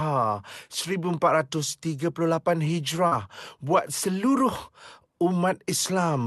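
From 3.07 to 3.13 s, a short concealed packet loss fills 40 ms with a guessed continuation of the preceding sound, heard as a brief smear.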